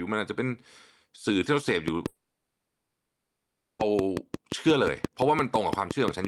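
Speech with two faults. From 1.88 s to the end, a train of clicks ticks over everything, pauses included. They come at a regular 5.7 per second and stand well above the speech. Likely interference from nearby equipment or a faulty connection or power supply is injecting each pulse. From 2.07 to 3.81 s there is a long network dropout. About 1.7 s of speech is lost. Throughout that gap the receiver likely repeats the last sound as a smeared buzz rather than falling silent. Speech resumes afterward with the missing part gone.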